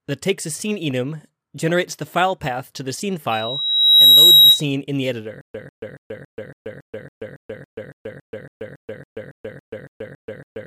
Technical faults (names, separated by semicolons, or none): loudspeaker feedback squeal; stutter with silent gaps